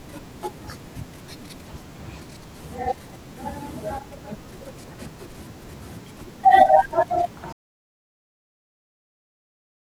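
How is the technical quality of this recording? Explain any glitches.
One fault is present. At 7.53 s the speech drops to silence, with no room tone, through to the end: an audio dropout to silence, likely from the input being lost while the recorder kept writing zeros.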